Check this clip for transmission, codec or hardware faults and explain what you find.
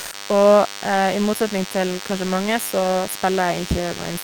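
Two faults are present in this speech clip.

DECT cordless phone buzz runs throughout: a nearby handset or base pulses every 10 ms, the audio circuit rectifies it, and a thin 100 Hz buzz with many harmonics sits roughly 15 dB below the speech.

Sound is dropped by the voice detector from 0.00 to 0.11 s: the opening is likely treated as background and not sent, so about 110 ms of sound gives way to comfort noise, which fits Opus discontinuous transmission.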